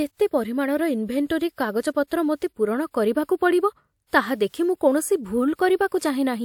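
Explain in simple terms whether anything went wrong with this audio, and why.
Pre-echo appears near the end of this speech, at 5.88 to 5.92 s and again at 5.98 to 6.02 s. A short hiss, about 30 to 40 ms long, arrives just before a sharp sound and softens its start. Compression noise meant for the loud moment leaks backward into the quiet gap ahead of it, so unlike an echo or reverb, the smear comes before the sound instead of after.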